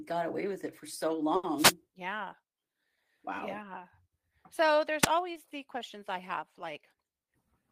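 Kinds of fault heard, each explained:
Burst of packet loss: around 1.35 s the decoder stretches the last sound for about 80 ms and fades it, then picks up with roughly 80 ms skipped.
Wireless microphone noise hit: the radio link dips into a fade, so receiver noise swells into a quick swish of static at 1.57 to 1.73 s and 5.00 to 5.07 s.
Short concealed packet loss: about 20 ms goes missing near 5.33 s, and the patched-in continuation leaves a tiny smear before the real audio blends back.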